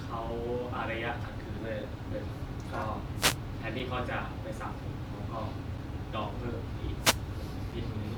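At 1.57 s the speech jumps forward. This is compressed frames skipped. About four frames never reach the output, so roughly a tenth of a second of speech is lost. It happens again at 3.00 s. That time about two frames go missing, around 40 ms of audio.

At 1.83 s there is a tiny hard-edged hole. This is a gap between chunks. The speech arrives in pieces about 2 s long. A silence of 6.5 ms sits at each join, probably from padding or a late start on each piece. Nothing is cut away. The flow simply stops briefly. The same hole recurs at 3.79 s, 5.78 s and 7.72 s, on a steady two-second beat.

From 3.15 to 3.38 s a burst of hiss washes over the speech. This is a wireless microphone noise hit. The radio link from an analogue FM microphone fades when reflected signals cancel the direct one. The receiver's noise then rises and masks the voice. It sounds like a quick swish of static lasting under a quarter second. 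A second hit follows from 6.97 to 7.22 s, similar in length and character.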